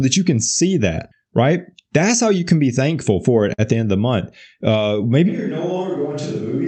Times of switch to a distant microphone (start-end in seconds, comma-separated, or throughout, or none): 5.30-6.68